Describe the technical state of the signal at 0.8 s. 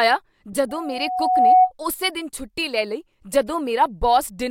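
A loudspeaker feedback squeal is building at 738 Hz, from 0.69 to 1.72 s. The mic-speaker loop exceeds unity gain. The tone swells over most of a second toward roughly 10 dB above the speech.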